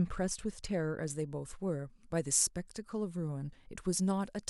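From about 1.06 s through to the end, the speech has pre-emphasis left on: the treble boost applied before recording never got its matching cut. Highs sit about 8 dB up at 10 kHz relative to 1 kHz, which fits the CD 50/15 µs curve, so it turns thin, bright and hissy on sibilants.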